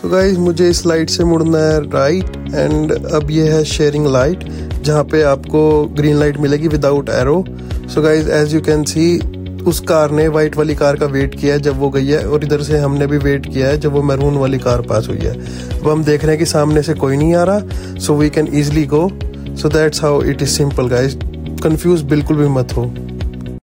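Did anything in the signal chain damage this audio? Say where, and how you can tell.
No, nothing in the audio stood out as damage from any stage of the chain on listening.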